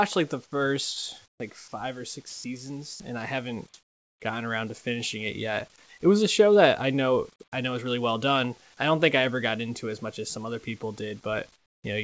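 At 1.26 to 1.40 s, the sender likely stopped transmitting during a pause, so the receiver filled it with comfort noise in place of the background: a steady, featureless hiss about 4 dB quieter than the real room sound. Within that stretch, from 1.38 to 1.40 s, the voice detector was likely slow to register the returning speech, so the onset was clipped by the voice detector and the sound begins abruptly, its soft start replaced by noise. At 1.68 to 1.72 s, 2.30 to 2.44 s and 2.94 to 3.00 s, the detector likely mistook sound for background, so sound was dropped by the voice detector and short gaps of flat noise cut into the speech, the longest about 140 ms. At 3.74 to 4.20 s, comfort noise again likely stands in for the background, now about 1 dB louder than the real room sound and lacking its texture. At 11.56 to 11.84 s, the same likely substitution brings a flat noise about 15 dB quieter. 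Throughout, the call path leaves nothing above 8 kHz, which fits a G.722 wideband codec.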